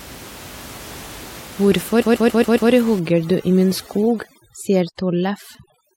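A speech recording shows two faults. From 2.01 to 2.71 s, repeated frames produce a stutter: a 139.3 ms block plays five extra times, adding about 0.7 s to the running time. From 2.99 s to the end, overdone noise removal takes over. The room noise, which sits about 20 dB below the speech, is pushed to near silence with twinkling specks, and quiet spectral detail in the voice near the noise floor is gated out with it.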